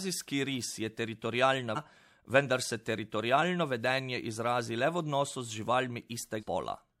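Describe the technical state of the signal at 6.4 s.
Compressed frames skipped at 6.39–6.43 s: what sounds like about four frames are never decoded, so the speech jumps roughly a fifth of a second ahead.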